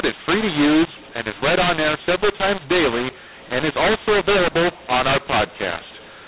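From start to finish the speech runs through a mu-law and A-law mix-up: it was coded as G.711 mu-law but decoded as A-law. The two laws map their 8-bit codes to different levels, so every sample lands wrong. Some come out too loud, some too quiet, and the quietest ones get pushed well above silence. You hear the speech as distorted, and the pauses fill with noise. The 4 kHz telephone band itself is still there underneath.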